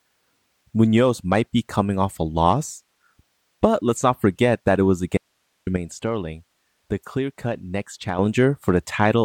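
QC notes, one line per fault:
5.17–5.67 s: audio dropout to a faint residue. Right after "forget that it was" the speech cuts out abruptly for about 0.49 s, leaving only hiss roughly 50 dB below the signal. The likely cause is a lost stretch of signal while the path stayed live.
5.77–8.19 s: sudden gain jump. The level drops by about 8 dB at once, speech and background noise together, then returns at 8.19 s. There is no ramp. This likely comes from a gain setting applied instantly in the digital path.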